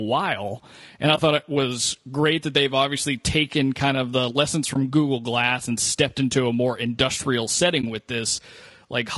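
From the start, the speech carries plainly audible codec damage. It sounds rough and grainy. Noise sits between the harmonics, and the top band sounds lowered or synthetic. The likely cause is low-delay AAC compression of the AAC-ELD kind used in video calls, at a bitrate that fits about 32 kbps. At that rate the coder cannot keep every frequency line of each frame, so the detail is replaced by coarse approximations.

At 1.15 to 1.19 s, just before "thought it was great", there is a brief dip. This is AAC frame loss with muting. The decoder set the lost frame's spectrum to zero. The overlapping windows fade the sound out and back in. The same happens at 4.73 to 4.76 s, after "kind of the lessons", and at 7.81 to 7.84 s, after "into a more industrial". Each fits a single lost frame of about 20 ms.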